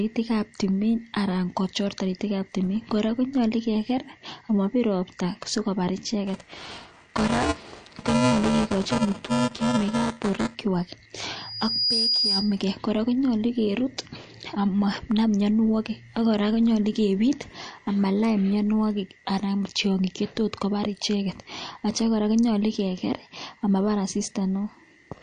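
Across the whole speech clip nothing is heard above 9.5 kHz, and quiet detail swirls and chirps on the s sounds. This is likely MP3 compression, pointing to a low bitrate near 48 kbps. Unlike a simple low-pass filter, the damage shifts from frame to frame.

From 6.27 to 10.55 s a robotic buzz at 375 Hz rides on the speech. That rate fits a 128-sample buffer, so this is buffer tearing: the writer and reader of the ring buffer have crossed. About a fifth of each buffer replays audio from a few milliseconds earlier, with hard joins. Unlike hum, the buzz sounds only while there is signal.

From 11.36 to 12.63 s a loudspeaker feedback squeal appears. A single 4.9 kHz tone swells over about half a second until it is roughly as loud as the speech, because the microphone-speaker loop has more than unity gain at that frequency. A steady whistle would not grow by itself like this.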